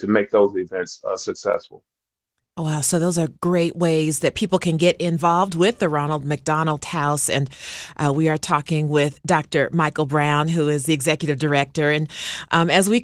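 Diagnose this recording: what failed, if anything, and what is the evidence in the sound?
Nothing has failed here: the speech comes through the Opus voice compression at around 20 kbps with the band kept full and only the light smoothing you'd expect from that coder at that rate.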